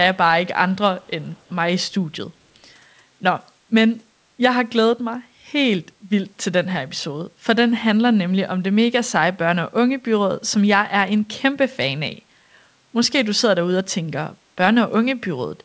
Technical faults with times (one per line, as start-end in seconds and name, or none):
1.02-1.50 echo leak